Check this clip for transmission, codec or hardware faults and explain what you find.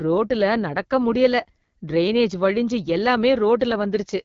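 One codec fault runs through the whole speech clip: the AMR wideband (HD Voice) codec at one of its lowest modes. Nothing is present above about 7.1 kHz, and the voice has a rough, raspy grain. This fits the 8.85 kbit/s mode. The encoder models speech up to 6.4 kHz with a pulse-excited vocal tract filter and fills the band just above with shaped noise. At this rate the excitation is too coarse, hence the rasp. Narrowband AMR would cut near 3.4 kHz instead, and a plain low-pass filter would leave no rasp.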